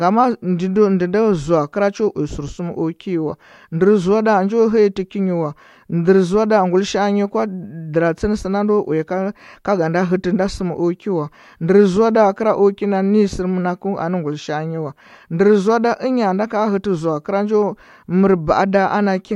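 No technical faults can be heard anywhere in this recording.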